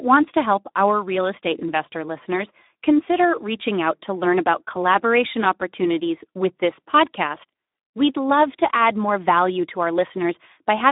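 From start to finish the speech carries plainly audible Speex codec damage, which fits a narrowband setting around 11 kbps. The codec models the voice and codes its excitation with few bits, so the voice takes on a noisy, hoarse texture. The band runs from 150 Hz to 3.7 kHz, with nothing above 3.8 kHz. On a spectrogram that shows as an empty region above a hard ceiling, with smeared, grainy harmonics below it.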